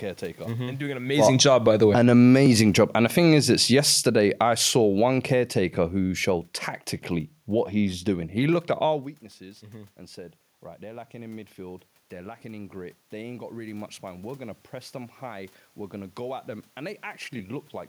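After "and doing an", automatic gain falling lowers the level about 5 dB from 1.1 to 2.2 s, and again from 2.74 to 6.53 s before "tactically what he's doing". The AGC judged the input too loud or its background noise too strong, so speech and room noise sink together: a tapering waveform, a uniformly dimming spectrogram.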